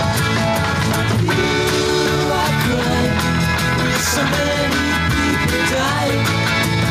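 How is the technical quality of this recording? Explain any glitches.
The technical quality of this recording holds up well, and there are no glitches to explain.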